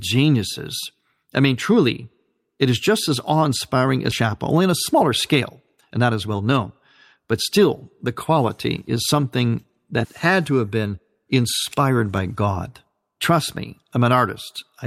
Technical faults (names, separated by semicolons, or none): skip ahead; jitter buffer speed-up